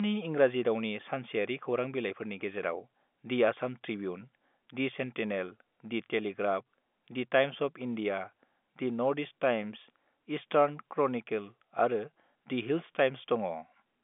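Nothing stood out on listening to this speech recording, which comes through the usual narrow telephone band of a G.711 line.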